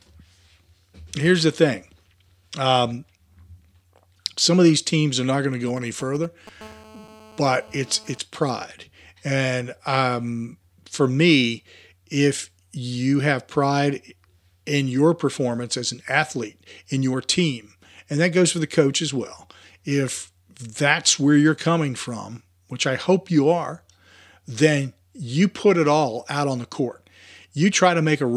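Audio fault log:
5.68–6.49 s, GSM signalling bursts: right after "are not going to", a galloping dit-dit-dit of brief 217 Hz buzzes, roughly 20 dB below the speech. A nearby 2G phone sent short groups of signalling bursts, which the audio circuitry rectified into audible pulses.
6.61–8.18 s, GSM phone buzz: a hard, raspy 217 Hz buzz rich in harmonics, about 25 dB below the speech, holding steady and unrelated to it. The phone moved into continuous call transmission, and each radio burst was rectified into the audio path.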